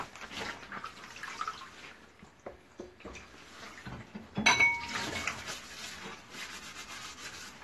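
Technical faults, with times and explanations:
Throughout, AAC compression: nothing is present above 12.1 kHz, and the audio sounds dull and smeared, with a warbling, fizzy texture on sustained sounds. Unlike a plain low-pass filter, the band below the cut-off is also patchy, likely from AAC-LC coding at around 32 kbps.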